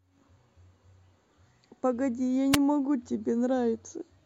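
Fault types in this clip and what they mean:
Wireless microphone noise hit: The radio link from an analogue FM microphone briefly fades as reflected signals cancel. Receiver noise rises through the speech. Here it is a short burst of static from 2.52 to 2.57 s, lasting about 47 ms.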